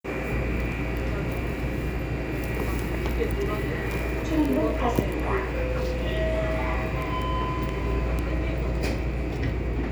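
A bit error spike, a single flipped bit in memory or on a digital link, strikes at 2.79, 3.91, 7.02 and 8.19 s. The sample value jumps by a power of two and snaps back, reaching about -13 dBFS at 2.79 and 8.19 s and about -19 dBFS at 3.91 and 7.02 s, where two adjacent samples are hit at 3.91 s. Each spike is heard as one sharp, broadband tick unrelated to the surrounding sound.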